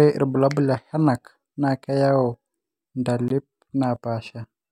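A block of digital silence at 3.28 s cuts this speech clip to silence for about 20 ms. The samples drop out and return with no fade, heard as a brief tick-like hole, likely from an output buffer not filled in time.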